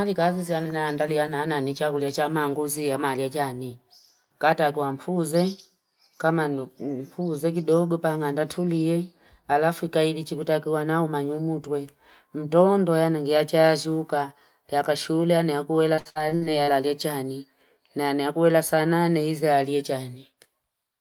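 From 15.95 to 16.69 s, just before "chani nani nakuela saa", repeated packet loss leaves six gaps, up to 61 ms each, patched by extending prior sound, giving choppy speech with pieces missing.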